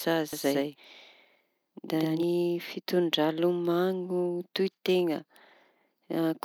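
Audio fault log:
0.33–2.23 s, doubled audio track: a second, slower capture path or an out-of-step edit likely mixed the speech in twice. An equally loud, dry, full-band copy trails by roughly a tenth of a second, making a flat slapback echo that switches on and off abruptly.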